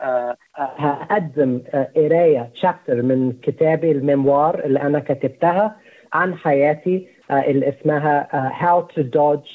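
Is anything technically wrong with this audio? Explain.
No, nothing technically wrong can be heard here.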